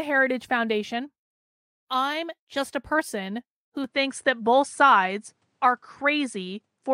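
The recording input was likely switched to a poorer device at 3.84 s, right after "just a person who", and the change holds until the end of the clip. From that point the speech carries nothing above about 10.7 kHz, so the top end sounds duller and boxier than before. A faint new background noise sits far below the speech. The switch is seamless, with no gap, and the overall level stays about the same.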